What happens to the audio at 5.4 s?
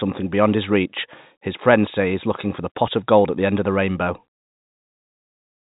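At 5.4 s the speech is intact, carried through the G.711 telephone coding with its usual band limit near 3.8 kHz and no fault at that moment.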